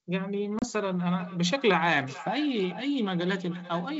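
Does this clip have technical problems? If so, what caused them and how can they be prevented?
Yes, two faults can be heard.

Packet loss on an ADPCM call hits between 0.59 and 0.65 s, with about 30 ms of sound missing, which fits a few consecutive packets being dropped. The gap is a hard-edged hole of silence. Because ADPCM sends only differences, the receiver's adaptive predictor and step size drift away from the sender's during the gap. The sound therefore resumes slightly distorted, before the decoder tracks back in. To prevent it, use a jitter buffer with packet loss concealment that resets or re-synchronises the ADPCM state after a loss.

Feedback echo between two devices runs from 1.19 s to the end of the clip. The audio comes back roughly every 0.4 s, peaking about 15 dB below the direct sound. This happens when two devices in the same room are on the same call. One device plays what the other's microphone sent, and that microphone picks the playback up again. 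Each device's echo canceller only removes its own output, so the loop passes through both. Each pass sounds thinner and more ringing. The underlying G.722 wideband coding at 64 kbit/s is working normally. To prevent it, have only one device in the room join with audio, or mute the second device's microphone and speaker.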